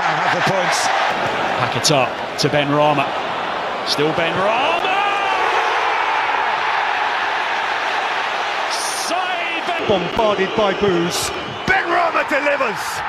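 At 11.34 s there is a single instance of damaged data in a compressed stream, lasting only about 4 ms. A short run of the encoded data at that point is corrupt, so the decoder cannot read the affected frame correctly and has to resynchronise on the next valid frame header before normal output resumes. The result is a very brief digital blip, a sharp, unnatural click-like chirp.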